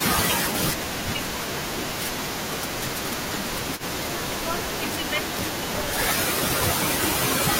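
Speech opens with a brief dip in level between 0.03 and 0.1 s. For about 70 ms the voice drops by roughly 10 dB and sounds pulled back before it recovers. This is speech suppressed in double talk. The most likely cause is that both ends were talking at once, and the echo canceller could not tell this talker from the loudspeaker echo, so it turned the near-end voice down along with the echo. At 3.78 to 3.82 s a faint, short scrap of delayed voice appears, a copy trailing the original by 281 ms and sitting about 20 dB below the speech. This is an echo leak. It was likely caused by a loudspeaker on one side of the call whose echo canceller failed to remove all of what its microphone picked up, so a piece of the voice was sent back down the line.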